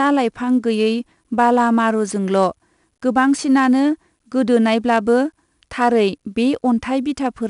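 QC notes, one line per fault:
throughout: 4-bit ADPCM compression. Gritty hiss rides on the speech and swells and fades with its level, unlike steady background noise, because each sample is coded as a coarse 4-bit step from a prediction; nothing above 10.6 kHz, consistent with roughly 88 kbps.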